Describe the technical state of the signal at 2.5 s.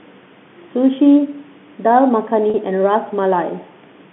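At 2.50 s the sound briefly freezes into a slightly held, buzzy tone that lasts until about 2.54 s, roughly 40 ms. This is packet loss with pitch repetition: audio went missing in transit, and the receiver filled the hole by repeating the last pitch period it had, beginning to fade that loop out. The gap's length fits two lost 20 ms packets, short enough that the result is a held buzz rather than silence.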